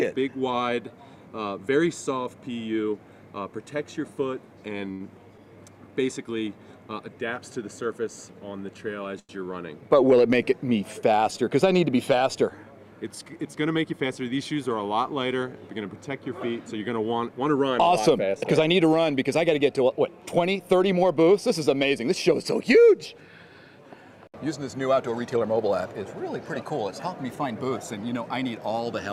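At 4.91 s and again at 9.20 s the audio hangs briefly: each is a short stall from a late packet. A packet missed its playout time, the jitter buffer ran dry, and the receiver stretched the last sound, for 84 ms and then 93 ms, until the data arrived. Playback then resumed where it left off, so nothing is lost, but the held sound drags with a faint buzzy dip, and overall delay grows by the same amounts.

From 13.45 s to 13.94 s there is a jitter buffer speed-up. The buffer had built up more audio than its target, and the receiver trimmed it by cutting out short pitch-period-length slices in quick succession, removing roughly 70 ms in total. Pitch stays unchanged while playback runs at about 114% speed, so this half-second stretch sounds noticeably rushed compared with its surroundings.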